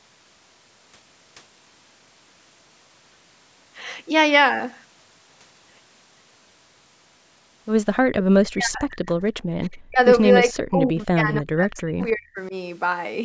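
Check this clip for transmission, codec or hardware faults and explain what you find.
Three faults are audible, all tied to a speakerphone's echo handling; the band-limit at 8 kHz from the call's microphone processing is normal.

Echo leak, 8.19 to 8.23 s: a faint delayed copy of the voice, about 15 dB down and lagging 311 ms, likely from echo cancellation missing part of the loudspeaker pickup. It looks like a weak repeated smear on a spectrogram.

Speech suppressed in double talk, 8.25 to 9.02 s, 9.86 to 9.99 s and 10.5 to 12.53 s: the speech dips or breaks up, by roughly 40, 40 and 35 dB, likely as the canceller clamps down while both sides talk. The waveform shows chunks of the envelope collapsing.

Background gated by the echo canceller, 9.42 to 9.58 s: room sound drops out for about 150 ms, by about 40 dB, while the loudspeaker plays, leaving a near-silent hole in the noise floor.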